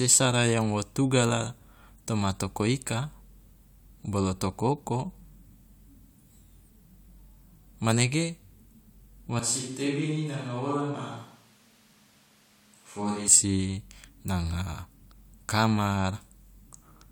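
From 9.39 s to 13.28 s the speech abruptly turns roomy and hollow, losing low-frequency body and dropping about 5 dB in level, while background noise rises to roughly 30 dB below the speech. The change is sudden at both ends. This is the signature of a switch to a distant microphone: the close microphone's feed was likely lost for this span, leaving a pickup further away that captures more room reflection and ambient noise.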